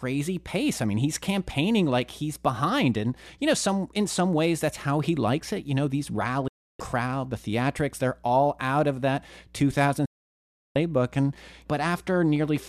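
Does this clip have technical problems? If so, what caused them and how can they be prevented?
Yes. Two digital broadcast dropouts cut the speech, from 6.48 to 6.80 s and from 10.06 to 10.76 s. The receiver muted with a 3 ms fade after frames failed or went missing. The second gap's length fits roughly 29 lost frames of 24 ms. A waveform shows flat silence and a spectrogram shows blank vertical bands. Better reception, through antenna placement or signal strength, prevents these.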